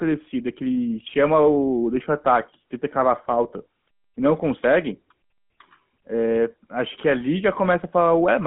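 Throughout the speech, the GSM full-rate codec adds a plainly audible buzzy, gravelly grain. The voice is rebuilt from a vocal-tract model driven by sparse, regular pulses, which fits a 13 kbps coder. Sound spans only 150 Hz to 3.5 kHz, but band-limiting alone would sound muffled rather than rough.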